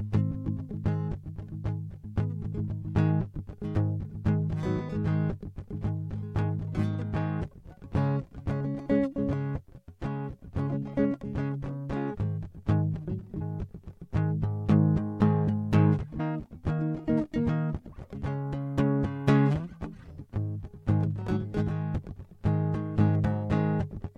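It's a music clip with compressed frames skipped in three places: at 0.30 s the music lurches forward by roughly 70 ms, and at 13.40 s and 16.19 s it jumps ahead by roughly 100 ms each. The gaps fit whole 23.2 ms frames left out, about three and then about five at a time.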